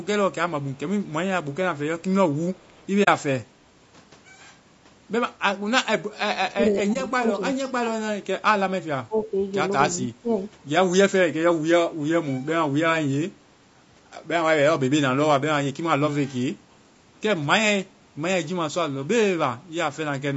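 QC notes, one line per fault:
Throughout: low-delay AAC compression. The speech sounds rough and grainy throughout. Noise fills the gaps between the pitch harmonics. The top band sounds thin and synthetic. This is plainly audible. The cause is likely AAC-ELD coding at a low rate, which fits about 32 kbps. At that rate too few bits remain for clean detail, and the coarse spectrum comes through as grit.
0.64–0.78 s, 1.07–1.11 s, 2.53–2.87 s: echo leak. A faint delayed copy of the speech trails the original by 239 ms. It is very quiet, roughly 35 to 40 dB below the speech. It comes in short scraps rather than a steady tail. The likely cause is a loudspeaker on the far side whose echo canceller left some residue. That residue was sent back down the line, so the talker's own sound returns late.
3.03–3.08 s and 6.93–6.96 s: AAC frame loss with muting. The sound drops into a brief soft-edged hole. 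The first gap lasts about 40 ms and fits two lost frames. The second lasts 20 to 30 ms and fits one. It falls inside a suppressed stretch. The decoder zeroed the missing frames. The overlapping windows then faded the sound out and back in, which rounds off the edges.
6.54–8.53 s, 8.69–9.14 s, 9.9–10.29 s, 11.07–11.45 s: speech suppressed in double talk. The speech dips and cuts out in pieces. The deepest drops reach roughly 30 dB, and the shallowest about 15 dB. The first stretch loses around 1.5 s in total. The likely cause is both sides talking at once. The echo canceller could not tell the local talker from the loudspeaker echo. It turned both down.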